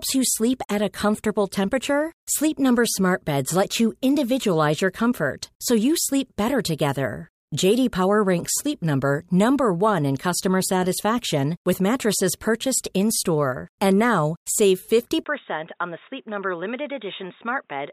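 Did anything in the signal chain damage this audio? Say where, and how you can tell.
Yes. At about 15.24 s, right after "now save", there's a gap of about 20 ms, and from then to the end the sound is about 10 dB quieter, boxy, and has nothing above 3.8 kHz, with a new noise floor around 45 dB down. That's likely an input switched to a poorer device at the driver level, with the system dropping to another mic or a headset call profile with its own narrower band, gain and hiss.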